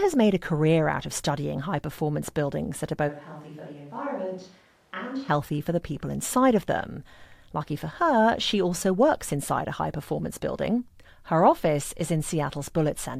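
From 3.10 to 5.28 s, after "performance buildings that are", the speech turns roomy and hollow and about 10 dB quieter, likely from a switch to a distant microphone. The waveform steps down abruptly, and the spectrogram shows thinner lows and a raised noise floor until "for the people inside".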